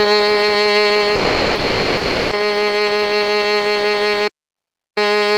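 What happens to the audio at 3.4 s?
Nothing goes wrong at 3.4 s; the music plays through that moment intact, with no dropout, click or distortion.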